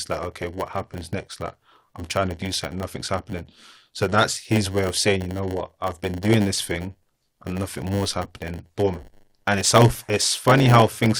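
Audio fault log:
throughout: block size mismatch (padded). One stage hands over blocks a little shorter than the next stage expects, and the missing tail of each block is filled with silence. That short zero gap recurs 100 times a second, so the speech carries a steady 100 Hz buzz, which points to blocks about 10 ms long. The padding also stretches the timeline, and the speech runs at 0.919 times normal speed while its timbre stays about where it should be.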